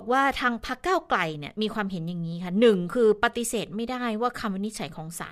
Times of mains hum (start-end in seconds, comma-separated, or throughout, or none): none